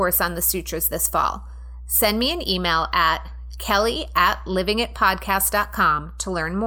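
Speech recorded with mains hum throughout: a steady 60 Hz tone with low harmonics, roughly 15 dB below the speech, from a ground loop or nearby transformer.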